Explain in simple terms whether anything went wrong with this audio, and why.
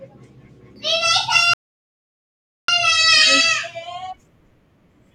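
A rebuffering stall happened: the player ran out of downloaded speech at 1.54 s, fell silent until 2.68 s, then resumed exactly where it stopped.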